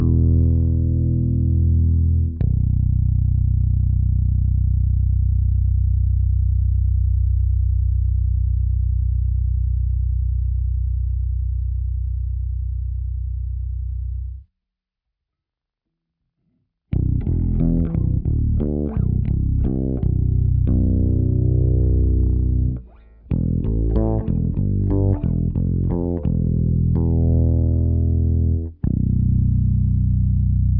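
No technical faults can be heard in this audio.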